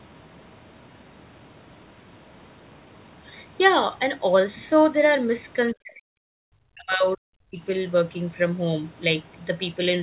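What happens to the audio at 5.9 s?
At 5.9 s the speech is sharply cut. From 5.72 to 7.25 s it drops by around 40 dB. This is likely speech suppressed in double talk, with the echo canceller muting the talker during overlap.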